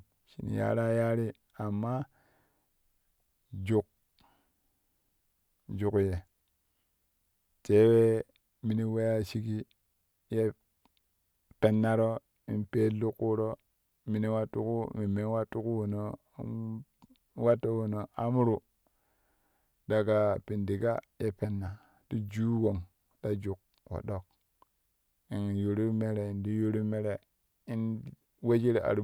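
No dropouts, clicks, distortion or other transmission faults turn up anywhere in this speech recording.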